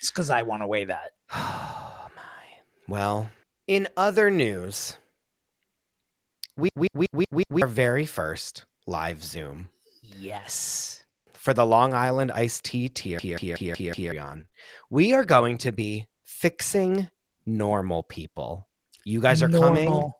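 Speech, with two system hang loops at 6.69–7.62 s and 13.19–14.12 s. Each repeats a 186 ms fragment five times, a machine-gun stutter at 5.4 Hz that fits an 8192-sample ring buffer, and about a second of audio is lost each time. Lost packets rebuilt from error correction follow at 14.25–14.39 s, 80 ms consistent with four 20 ms packets, and again at 19.08–19.10 s. The decoder played low-bitrate copies there, so those stretches sound rougher and noisier without any gap. Between 14.41 s and 14.54 s, three back-to-back short concealed packet losses of about 20 ms each were filled by extrapolating the preceding sound, giving a brief smeared, wobbly patch.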